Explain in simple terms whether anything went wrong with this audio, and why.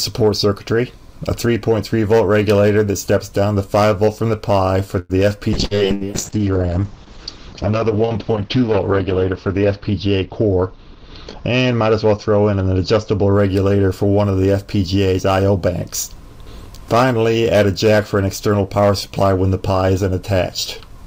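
Several things went wrong, all typical of an internet call.

At 4.99 s the sound stretches into a short fading buzz or hiss until 5.13 s. That is a call audio freeze. It was likely caused by packets arriving late. The audio then carries on from where it paused, with about 0.1 s of filler added and nothing lost.

From 5.58 s to 13.40 s there is a call bitrate drop. The connection could carry less data, so the sound was squeezed harder. It turns rough and muffled, and the high end is cut from 20 kHz down to 8 kHz. It is worst for about 3 s.

Inside that stretch there are two bursts of packet loss, at 5.65 s and 5.95 s, each about 0.09 s long. Each time, about 60 ms of audio never arrived. The gap was filled with a fading continuation of the last sound, then the audio jumps ahead.

From 10.21 s to 11.26 s there is a jitter buffer speed-up. Too much audio had piled up waiting, so tiny slices were cut out to catch up. 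About a tenth of a second is removed, and the sound runs about 9% faster without changing pitch.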